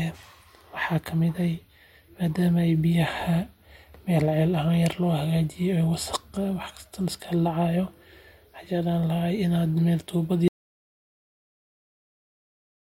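Speech, with an audio dropout to silence from 10.48 s that runs to the end of the clip. The sound cuts off mid-flow into complete silence, not a fade or a pause, since no room tone remains. The input was likely lost while recording continued.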